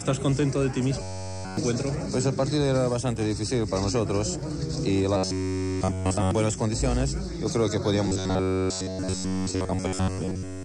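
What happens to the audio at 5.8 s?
From 5.17 to 6.31 s it's robotic sound from repeated short buffers: a stiff metallic buzz near 94 Hz, likely an 11 ms chunk looping.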